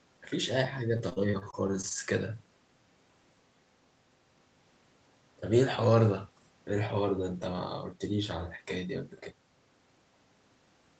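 From 0.97 to 2.01 s, repeated packet loss produces a robotic, choppy stretch: short gaps, none over 28 ms, are patched by extending the preceding sound.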